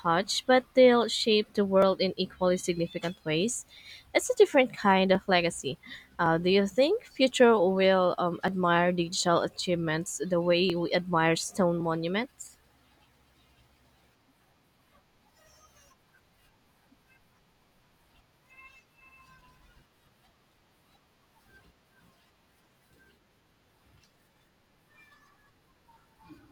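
From 0.72 s to 26.22 s, clicks recur every 1.11 s, likely clock drift buffer slips: two clocks disagree, dropping or repeating sample blocks.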